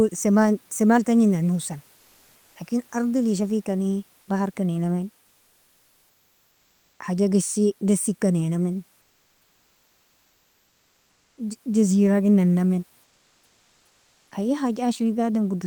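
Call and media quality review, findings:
Comfort noise in place of the background, 9.01–11.37 s (2.36 s) and 13.03–14.31 s (1.28 s). Sender likely in discontinuous transmission during speech pauses, pointing to Opus DTX; receiver synthesising filler noise. Real room noise, about 40 dB below speech, swapped for steady, featureless hiss, about 3 dB and 4 dB quieter respectively, sitting about 44 and 40 dB below the loudest sound. Background texture drops out, returns when speech resumes.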